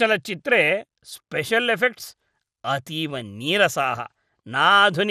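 A speech recording that has likely been through MP2 compression with too small a bit budget, and the damage fits a rate of around 80 kbps. Across the whole clip, the MPEG Layer II sub-band coder runs short of bits and drops its highest bands outright, so nothing remains above 14.4 kHz. The bands that survive are coarsely quantised and flick in and out, giving a plainly audible gurgling, granular distortion over a dulled top end.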